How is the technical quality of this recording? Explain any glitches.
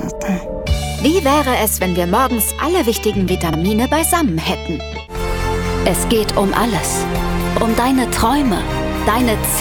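The recording has one recurring glitch, overlapping chunks, heard twice. At 3.53 s and again at 7.58 s, about 48 ms of audio plays a second time. The audio was cut into 4 s chunks, and each chunk begins slightly before the previous one ended, so that sliver is repeated. It sounds like a brief stutter or click. On a waveform the repeated 48 ms segment shows a copy with a step at each join, and on a spectrogram a thin vertical line appears at each join.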